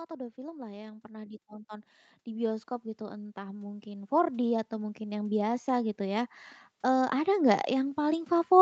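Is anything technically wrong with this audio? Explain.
Yes. Automatic gain rising runs from 0.08 s to the end of the clip. The call's gain control judged the input too quiet and kept raising its amplification, so the speech and the background noise swell together steadily instead of holding a constant level. The lack of content above 8 kHz comes from the call path's normal band limit and is not a fault.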